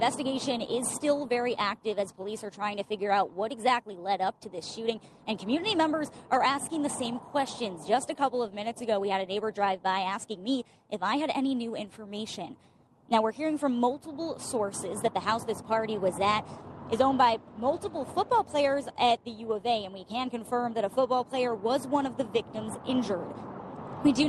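No technical faults are audible anywhere here.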